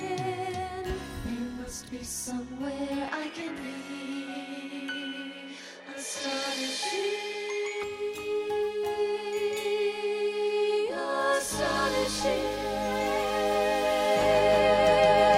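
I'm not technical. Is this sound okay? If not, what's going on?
No. From about 3.08 to 7.83 seconds the sound turns duller, with its top end gone above about 11.8 kHz and a faint new background hiss. Then it clears up again. This is most likely an input switched to a poorer device. Unlike a simple tone or filter change, it arrives with its own hiss, and it snaps in and out with no gap. The loudness stays about the same throughout.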